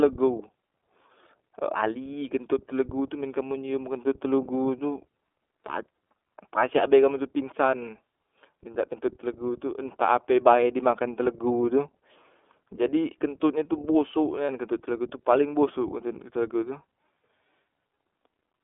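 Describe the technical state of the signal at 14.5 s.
At 14.46 to 14.49 s a single 30 ms stretch is lost iLBC frames. The decoder repeats the last pitch cycle mixed with noise, giving a brief held, faintly buzzy vowel. A spectrogram shows frozen, evenly spaced harmonic stripes, and the waveform shows a copied periodic cycle before normal speech resumes almost immediately.

Around it, the iLBC codec is plainly audible. Band-limiting to roughly 300 Hz to 3.5 kHz leaves the speech narrow and slightly rough and synthetic. A spectrogram shows a sharp ceiling near 3.5 kHz with nothing above, and the 30 ms frames fit iLBC's 13.33 kbps mode.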